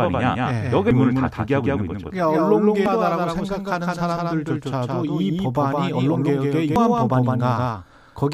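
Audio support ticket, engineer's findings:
Doubled audio track, whole clip. Speech heard twice, second copy roughly 150 ms behind, about 5 dB quieter. Full-band, no decay or room colour. Likely a second capture path or an out-of-step edit.

Damaged data in a compressed stream at 0.91 s, 2.86 s and 6.76 s. Each a short chirp or blip. Component: decoder input. Corrupt bytes in the compressed frames. Decoder loses sync, then locks onto the next frame header. Check the transport for dropped or overwritten data.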